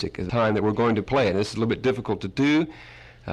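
A skip ahead at 0.29 to 0.31 s drops roughly 0.7 s of audio, and the two sides are spliced directly, showing as an abrupt waveform discontinuity with no silent gap. From 0.39 to 1.13 s, jitter buffer speed-up plays the audio at 109% speed, trimming about 70 ms of pitch periods. On a spectrogram the events look compressed in time while the harmonic spacing stays the same.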